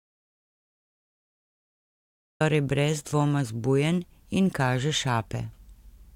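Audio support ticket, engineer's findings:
Audio dropout to silence, 0.00–2.40 s: clip opens on dead silence, no room tone, speech cuts in abruptly at 2.40 s. Likely input loss (disconnected device, failed link or mute) while recorder kept writing silence. Speech before 2.40 s unrecoverable.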